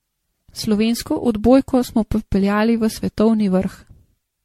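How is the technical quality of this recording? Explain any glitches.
The quality is pretty rough. Throughout the speech it sounds swirly, hollow and smeared, with blurred consonant attacks and nothing above 16.4 kHz. That's generation loss, likely from MP3 encoding repeated about ten times near 64 kbit/s, each pass stacking new quantisation damage.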